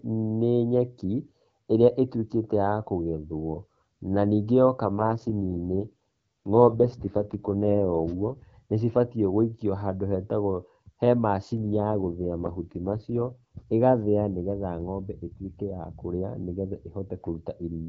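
A speech clip carried over a wideband AMR link, which is clear with only light coding texture. At 4.86 to 8.42 s and again at 11.58 to 13.36 s, an AMR rate drop turns the voice rough and synthetic. The band and continuity stay intact. That points to the codec stepping down from about 12.65 to 6.6 kbit/s on a weak radio link.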